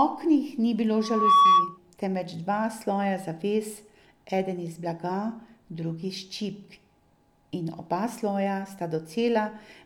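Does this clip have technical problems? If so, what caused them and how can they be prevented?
Yes. From about 0.99 s to 1.78 s a steady tone near 1.1 kHz swells up over roughly a third of a second and sits clearly on top of the speech, about 10 dB louder, before dropping away. This is loudspeaker feedback squeal: the microphone was hearing the loudspeaker it feeds, and at 1.1 kHz the gain around that loop exceeded one, so the tone fed itself and grew. Lowering the gain, moving the microphone out of the speaker's path, or notching 1.1 kHz would prevent it.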